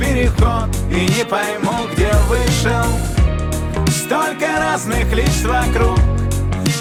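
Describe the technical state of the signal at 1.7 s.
At 1.7 s the signal is intact, with no audible fault at that point.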